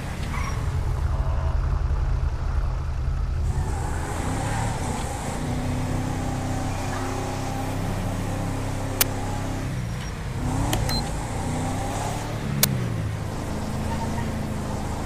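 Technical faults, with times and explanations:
4.78 to 4.85 s, corrupt frame decoded: for roughly 76 ms the sound gives way to a brief chirpy, noisy blip peaking around -20 dBFS, spanning what sounds like a few consecutive compressed frames. Damaged bits in those frames were decoded as if valid, so misread gains and codes put energy at the wrong frequencies.
9.01 s and 12.63 s, uninitialised buffer: each event is a sudden, loud crack of digital noise lasting about 12 ms, which fits a 512-sample buffer being played before any audio was written into it. Whatever stale memory it held was read out as samples. What sets these apart from the earlier corrupt frame is the rigid block-length duration and the raw noise character rather than a misplaced, codec-shaped chirp.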